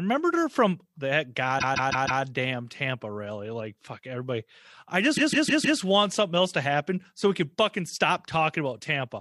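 Repeated frames at 1.58 to 2.21 s, right after "her from that", and again at 5.16 to 5.79 s, between "fuck everybody I" and "want something else to". Each time, a 156.7 ms block of the compressed stream, which fits a run of about six frames, is played four extra times. The result is a mechanical stutter that loops the same fragment and adds about 0.63 s to the speech at each point.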